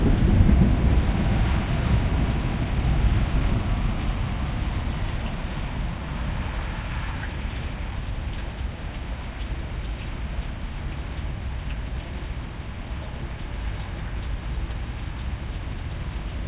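Nothing stood out as a technical fault on listening to these everyday sounds.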